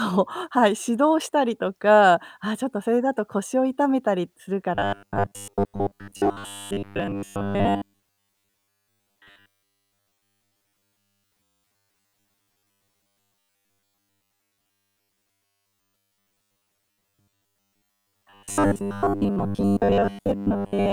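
From 4.75 s to the end, the speech turns into robotic sound from repeated short buffers. It becomes a rigid metallic buzz at 100 Hz. The likely cause is late audio, with a 10 ms block looped to fill gaps. Most of the audio is repeats.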